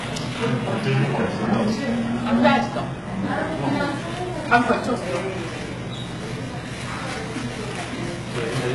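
Throughout, the audio has likely passed through heavy HE-AAC compression at a very low rate, consistent with about 12 kbps, so the treble is rebuilt from copied lower bands rather than coded. The top end sounds gritty and metallic, with nothing above 11.5 kHz.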